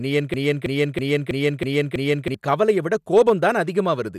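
A broken-record loop runs from 0.34 s to 2.34 s, where a 0.32 s fragment of speech repeats exactly six times, back to back, until "கவலைய விட". A stalled player or stream likely kept resending its last fragment, losing the speech meant for that stretch.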